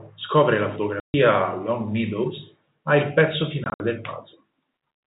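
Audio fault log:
1.00–1.14 s, packet loss filled with silence: after "scopre la" the speech cuts to dead silence for 140 ms. That fits seven lost 20 ms packets replaced by silence.
3.64–3.80 s, packet loss filled with silence: after "ha il pezzo", holes totalling 100 ms are scattered over 160 ms, the longest 60 ms.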